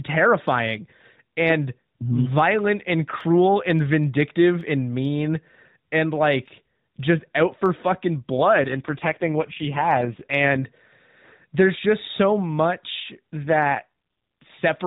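Dropped samples at 7.66 s, just after "and like just out", produce a single sharp click in this narrowband mobile speech recording, which passes nothing above 4 kHz. A handful of samples, a fraction of a millisecond, is likely missing, so the waveform jumps abruptly between values. AMR rate drops from 8.38 to 10.63 s and from 13.44 to 14.51 s, the second right after "there's just so much", make the voice rougher and more synthetic. The codec falls from 12.2 to 4.75 kbps, leaving fewer bits to model each frame, while the bandwidth stays the same and there is no gap in the sound.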